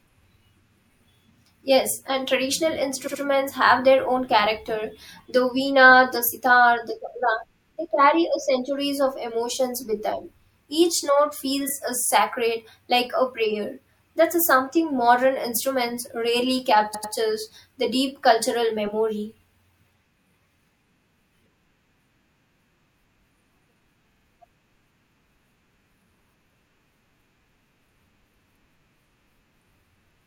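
Speech stutters briefly at 3.06, 11.68, 16.93 and 24.11 s. These are repeated frames: compressed blocks of 24 to 96 ms replayed one to three extra times, each adding up to about 0.19 s.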